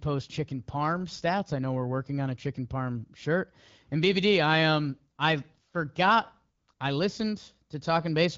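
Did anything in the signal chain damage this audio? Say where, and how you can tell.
Yes. The damage is AMR comfort noise at the call-processing and codec stage. At 5.15 to 5.17 s, 6.57 to 6.67 s and 6.73 to 6.79 s the real background is swapped for a smooth, steady hiss for 20, 100 and 60 ms. The phone's voice activity detector judged those moments silent and stopped sending speech frames, so the receiver synthesised noise from a rough level and spectrum description. Unlike packet loss, these gaps hold neither dead silence nor smeared, repeated speech, only even synthetic noise switching in and out, heard through the AMR wideband (HD Voice) codec's light coloration.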